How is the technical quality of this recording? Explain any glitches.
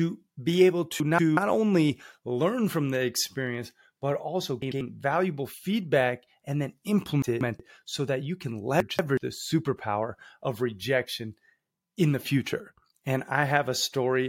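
The recording has four glitches, all frames out of order. They fall at 1.00–1.37, 4.62–4.81, 7.22–7.60 and 8.80–9.18 s. In each, two adjacent blocks of sound play swapped. They are 186 ms long, or 93 ms at 4.62 s. This gives a garbled flutter. No time is lost.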